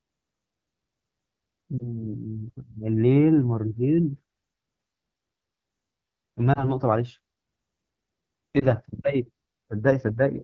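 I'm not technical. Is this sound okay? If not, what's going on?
No. All the way through, the speech has a rough, raspy edge, and the crisp top end sounds hissy rather than clear. That comes from the AMR wideband (HD Voice) codec, the system phones use to squeeze voice calls down. Here it is running at one of its lowest quality settings, where the compression can no longer rebuild the voice cleanly, so the roughness is plain to hear.

There are also three brief glitches, at about 1.78, 6.53 and 8.59 seconds, each a quick dip or wobble in the voice. These are lost AMR speech frames: each time, one tiny slice of the call, about 20 milliseconds, was damaged over the radio link. The phone filled the gap by guessing from the sound just before it, which causes the momentary warble, and the voice takes a moment to sound normal again.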